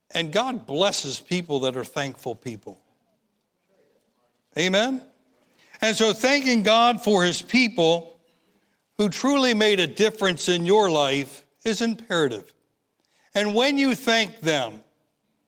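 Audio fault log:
0.89 to 13.53 s, lost packet rebuilt from error correction: packets went missing at 0.89–1.07 s (before "people that are thankful"), 7.25–7.63 s, 9.11–9.21 s (before "made a"), 10.23–10.41 s, 11.37 s and 13.51 s (before "when you thank"). Each was replaced by the low-bitrate copy carried in the next packet, so there is no gap. The rebuilt stretches run 20 to 200 ms, which fits 20 ms packets, and sound rougher and noisier.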